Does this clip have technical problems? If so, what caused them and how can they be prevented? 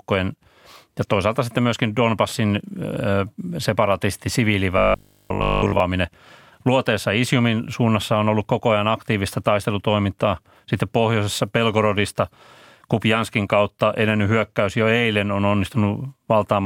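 Yes. Between 4.78 and 5.80 s, audio likely arrived too slowly and 20 ms buffers were replayed, giving robotic sound from repeated short buffers: a rigid, metallic 50 Hz buzz. A larger jitter buffer or steadier network delivery prevents this.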